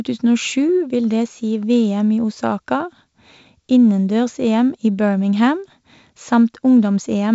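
No technical faults are audible.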